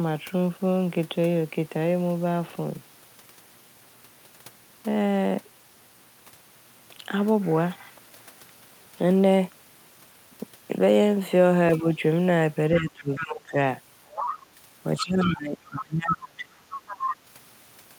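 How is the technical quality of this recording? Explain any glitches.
The second half of the recording has echo-canceller trouble, with the talker being ducked and the far end bleeding in.

Speech suppressed in double talk hits at 11.80–11.85, 12.79–13.57 and 15.0–16.68 s, dipping the talker by roughly 10, 20 and then nearly 30 dB. The likely cause is that both sides spoke at once and the canceller, unable to tell them apart, pulled everything down.

The other side's voice leaks through at 13.15–13.52, 14.07–14.39, 14.97–15.32, 15.65–16.16 and 16.71–17.16 s. It sits roughly 10 dB under the talker at first, then only about 5 dB under. Residual loudspeaker echo the canceller likely failed to remove is the source.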